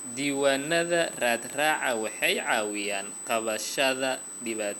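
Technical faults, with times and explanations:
Throughout, USB whine: a steady, fixed-pitch whistle sits at 8 kHz, roughly 10 dB below the speech. Current drawn by the USB bus in 125-microsecond microframes repeats 8000 times a second and leaks into the audio through the shared power or ground. On a spectrogram it is a thin, unbroken horizontal line at 8 kHz; on the waveform it is a fine, even fuzz filling the pauses.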